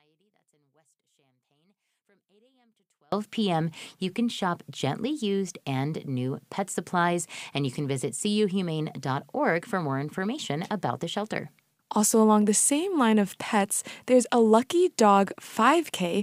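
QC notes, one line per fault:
0.00–3.12 s, one channel inverted: summed to mono, the sound falls by about 40 dB and only a faint difference signal remains. Unlike a dropout, that residue never goes silent, so reversed polarity on one side cancelling the shared content is the likely cause.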